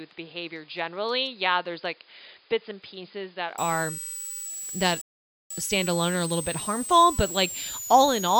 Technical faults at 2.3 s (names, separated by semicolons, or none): switching supply whistle; input switched to a poorer device